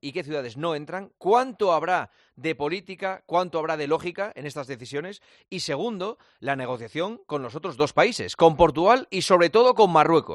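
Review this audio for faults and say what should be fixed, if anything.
At 7.80 s the level steps up by about 7 dB and stays there to the end, with the sound and background noise rising together. This sudden gain jump likely comes from a digital gain change applied between samples without a ramp. Fix by smoothing every gain change over a few milliseconds.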